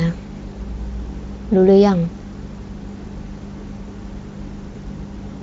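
At about 4.73 s, VoIP packet loss concealed by the speech codec interrupts the speech for roughly 38 ms, ending near 4.77 s. A single 20 ms stretch of audio went missing, and the decoder filled it by extending its last pitch period and spectral envelope while ramping the gain down. The gap is heard as a brief stretched, fading buzzy tone or coloured noise instead of a clean dropout. Decoder state is rebuilt frame by frame, so the voice stays weak or distorted just after. The Speex coding itself adds at most faint colouration.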